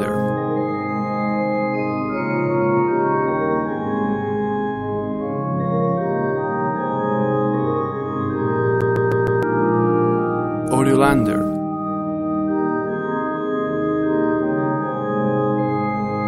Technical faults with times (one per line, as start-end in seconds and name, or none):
8.81-9.43 CD stuck on one turn